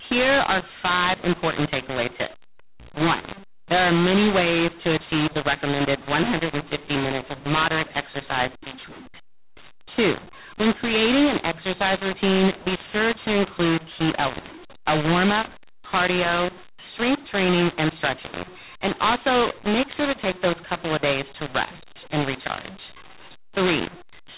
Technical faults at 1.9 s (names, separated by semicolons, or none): mu-law and A-law mixed up